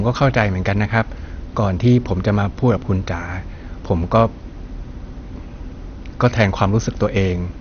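From start to finish the speech sounds dull and muffled, with nothing above about 6.5 kHz, and a gurgling, granular roughness runs through it as upper frequencies flicker in and out. The likely cause is MP2 compression at a low bitrate, perhaps around 48 kbps. With so few bits to share across its sub-bands, the encoder switches the upper bands off entirely and quantises the remaining ones coarsely, producing that familiar low-rate digital-radio texture.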